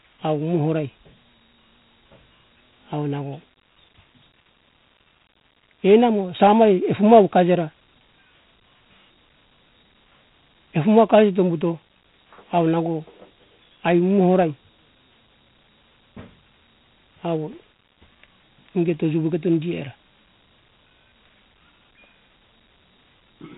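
Throughout, Dialogic VOX ADPCM coding: coarse 4-bit step-adaptive samples leave a gritty hiss riding the speech, and a spectrogram shows nothing above 3.8 kHz.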